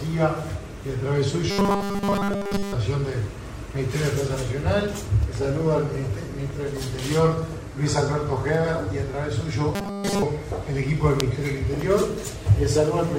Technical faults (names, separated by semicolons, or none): robotic sound from repeated short buffers